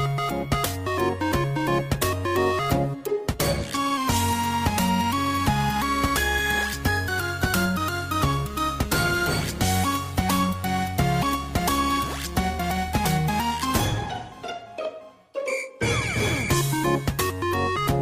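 No technical faults can be heard anywhere in this recording.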